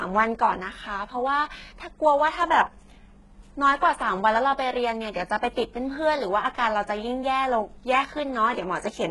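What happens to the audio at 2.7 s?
At 2.7 s you're hearing the same damage that runs through the whole clip: heavy HE-AAC compression, likely the cause, at a very low rate that fits something around 12 kbps. The codec keeps only the lower band properly and fakes the treble by copying lower bands upward under a rough envelope, so the top end never matches the real harmonics. The speech sounds gritty and lispy on s sounds, and nothing reaches above 11.5 kHz.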